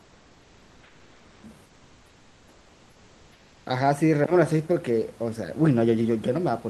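From 0.00 to 1.43 s and again from 1.66 to 3.66 s, comfort noise replaces the background. The room noise gives way to a flat, featureless hiss, about 3 dB and then about 4 dB quieter. Opus DTX likely stopped sending in those pauses.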